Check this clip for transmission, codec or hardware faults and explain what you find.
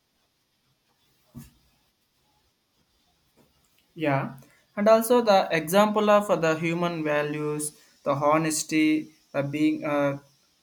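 Nothing here points to a transmission, codec or hardware problem; the speech comes across steady and intact the whole way.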